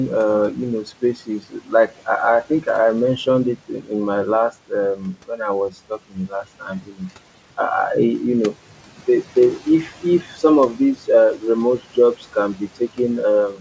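From 0.84 to 1.9 s, speech is cut by the noise suppressor. Parts of the speech dip by up to about 13 dB, for roughly a third of a second in total. The suppressor mistakes soft speech for the room noise, which sits about 22 dB below the voice. It happens again at 3.69 to 3.91 s and 6.1 to 6.32 s, both about 12 dB, and at 6.82 to 7.0 s, about 10 dB. The affected sounds come out faint and swallowed. Above 8 kHz there is nothing, which fits a wideband call codec.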